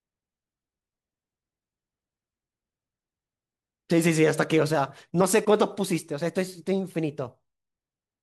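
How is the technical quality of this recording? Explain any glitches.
The speech carries one glitch. At 5.20 s there is a brief blip from damaged data in the compressed stream: corrupted bytes make the decoder misread a frame and lose sync until it finds the next frame header. It comes out as a chirp, squawk, click or short hole.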